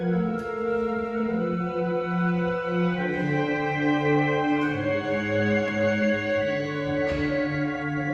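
No technical faults are audible.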